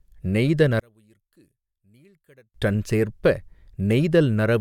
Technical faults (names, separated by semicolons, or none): one channel inverted